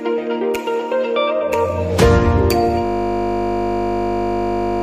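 At 2.85 s a system hang loop begins and lasts to the end. The system froze while the hardware kept replaying one 20 ms buffer, producing a steady 50 Hz buzz. Unlike mains hum, nothing continues underneath, because the audio stops moving forward.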